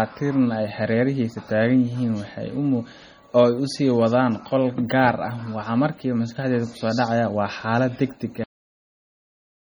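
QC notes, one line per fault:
throughout, MP3 compression: the encoder, likely short of bits at a rate that fits about 32 kbps, cuts the treble and switches weak frequency lines on and off between frames, so the speech sounds heavily watery and swirly, with metallic chirps on s sounds and smeared onsets.
8.44 s, cut-off end: the final buffers were never written or played, so the speech stops abruptly in the middle of a sound and falls straight to digital silence with no natural decay. That silence lasts for the remaining 1.3 s.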